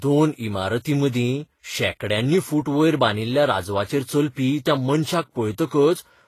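Transcoding between lossy codecs, throughout: the speech stops at 14.9 kHz and carries layered coding artefacts, likely from low-bitrate Vorbis re-encoded as HE-AAC.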